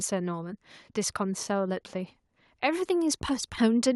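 At 3.02 s the speech carries a bit error spike: a single flipped bit in memory or on a digital link made the waveform leap by a power of two for three consecutive samples before snapping back. It sounds like one sharp tick, broadband and with no relation to the speech around it. Unlike a dropout or buffer glitch, nothing goes missing and there's no gap or repeat; it is an isolated, instantaneous click with no rhythm.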